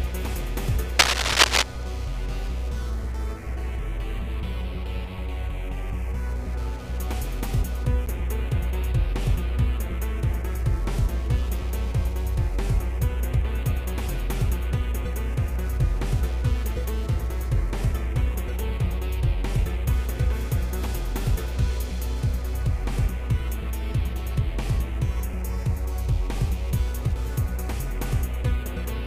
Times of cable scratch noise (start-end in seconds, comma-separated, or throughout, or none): 0.99-1.63